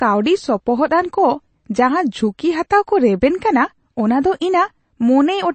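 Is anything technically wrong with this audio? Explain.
Yes. Throughout the speech there is a hard ceiling near 8.3 kHz and a watery, swirling texture, most likely MP3 compression at a low bitrate in line with about 32 kbps. Starved of bits, the encoder drops the treble and lets weak frequency components flicker between frames. That flicker is what separates it from a plain low-pass filter, which dulls the sound without any swirl.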